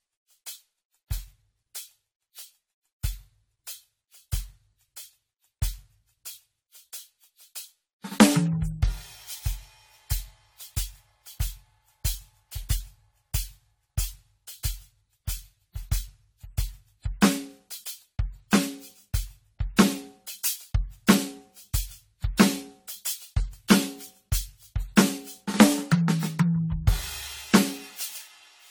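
From start to end the music carries generation loss: swirly, hollow smearing with blurred attacks, likely from around fifteen passes through AAC-LC at what sounds like 64 kbit/s. Unlike a single low-bitrate encode, the damage exceeds what that bitrate alone would explain, though content still reaches 19.9 kHz.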